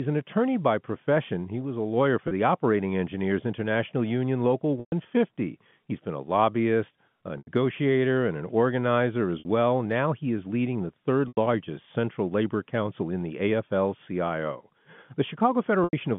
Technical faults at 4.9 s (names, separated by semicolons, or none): packet loss with pitch repetition